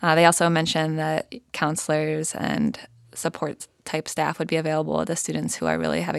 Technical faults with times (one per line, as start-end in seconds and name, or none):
none